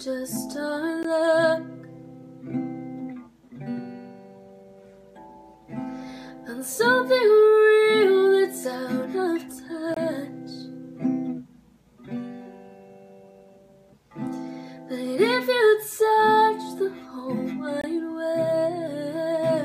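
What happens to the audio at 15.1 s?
Nothing goes wrong at 15.1 s; the audio plays through that moment intact, with no dropout, glitch or other fault to be heard.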